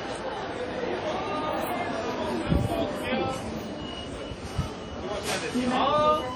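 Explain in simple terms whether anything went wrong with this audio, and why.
Something did go wrong, and it lasts from start to finish. The sound has a ringing, washy quality, and a hiss rises and falls along with it. Quiet details seem smeared or missing. This is heavy damage, likely from WMA compression at a low data rate. That kind of encoder stores audio in fairly long chunks, so its errors spread out in time as a wash, and the weakest tones get thrown away entirely.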